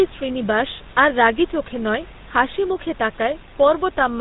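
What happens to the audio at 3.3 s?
At 3.3 s you're hearing the GSM full-rate codec, which runs through the whole clip. It models the vocal tract and excites it with regularly spaced pulses, so the speech comes out buzzy and gravelly, with nothing above 4 kHz, as you'd expect from a 13 kbps coder. The room noise sits about 24 dB under the speech.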